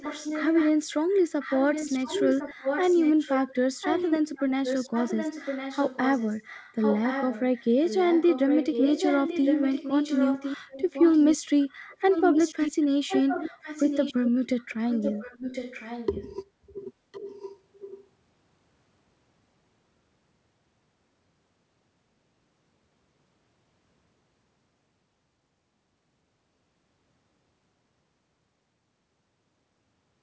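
From 0 to 0.72 s, 1.1 to 16.27 s, and 17.12 to 18.07 s, an echo leak repeats the speech about 1.06 s later. The likely cause is a far-end echo canceller missing loudspeaker pickup. The echo is loudest in the long middle stretch.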